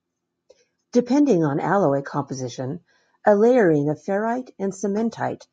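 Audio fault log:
No faults detected.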